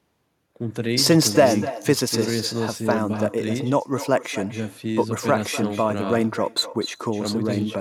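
Speech with echo and no canceller throughout: a quieter, thinner copy trails each phrase by roughly 300 ms, about 14 dB down, returned from the far end's loudspeaker and microphone.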